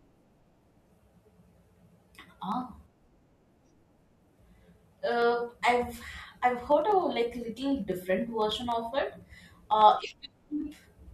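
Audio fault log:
0.12–11.02 s: periodic USB or driver dropouts, regular ticks every 0.1 s over the speech, as a tiny sliver of audio is skipped each time the driver stalls.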